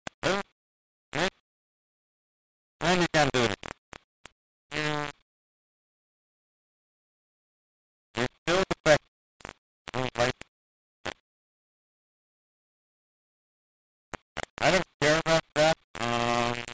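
From start to finish the audio carries heavy grainy distortion. This is low bit depth without dither. The level was likely rounded to very few steps, which fits about 3 bits, with no dither. The error tracks the signal. It is nearly as loud as the sound itself. Quiet passages turn rough and sputtery rather than smooth. The call path's band limit is audible too. Nothing is heard above 8 kHz.

Comfort noise replaces the background in the gaps. It appears at 0.14 to 0.22 s, 0.52 to 1.12 s, 1.40 to 2.80 s, 3.78 to 4.70 s, 5.22 to 8.46 s, 9.08 to 9.86 s, 10.48 to 14.58 s, and 15.84 to 15.94 s. When the sender judged the sound had stopped, it likely stopped transmitting. The receiver filled in synthetic noise. The real background sits about 45 to 47 dB below the loud parts. In the measured gaps it drops by about 17 to 20 dB, becoming a flat, featureless hiss until the sound resumes.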